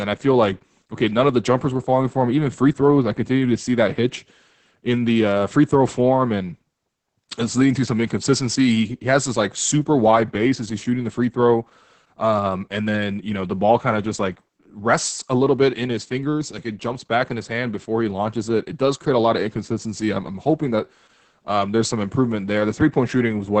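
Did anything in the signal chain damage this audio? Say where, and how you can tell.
Yes, at the codec stage. Throughout the speech, nothing sounds above about 8.8 kHz, and voices turn muffled, hoarse and faintly robotic. That is heavy Opus voice compression: SILK's wideband linear-prediction coding quantises the excitation coarsely, pointing to a bitrate near 10 kbps.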